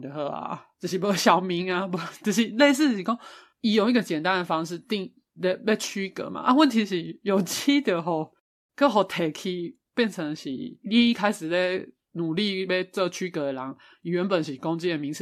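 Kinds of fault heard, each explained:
No technical faults can be heard in the speech recording, with the signal staying steady and intact throughout.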